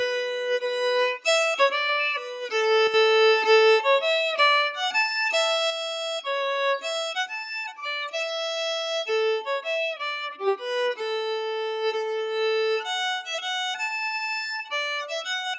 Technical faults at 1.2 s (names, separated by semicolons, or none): none